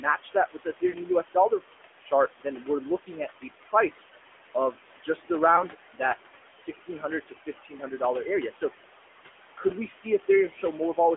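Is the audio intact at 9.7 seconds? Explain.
No. Lost AMR speech frames hit at 9.68 to 9.72 s. A radio error corrupted one speech frame, which fits a single 20 ms AMR-NB frame. The decoder covered the gap by repeating the previous pitch and vocal-tract settings at lower gain. The result is a brief dip or warble in the narrowband, phone-band sound before normal decoding resumes.

Around that same moment, speech is cut by the noise suppressor between 9.57 and 10.98 s. The suppressor mistook parts of the speech for steady background noise and pulled them down along with it, by about 14 dB at the deepest point. Roughly 0.4 s in total across that span is affected, so soft consonants and word endings there come out faint or swallowed.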